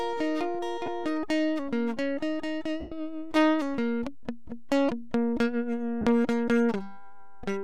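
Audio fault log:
Throughout: DC offset. The whole waveform sits shifted off the zero line, eating headroom; on a spectrogram it shows as a steady band at the very bottom.
0.86 s, 2.80–2.92 s, 6.01–6.06 s: lost LE Audio frames. The LC3 decoder repeats the last spectrum with random signs, so musical tones smear into noise. The 112.5 ms gap fades towards silence. The gaps fit about two, fifteen and six 7.5 ms frames. Spectrograms show blurred, noisy patches, and the waveform dips during the longest gap.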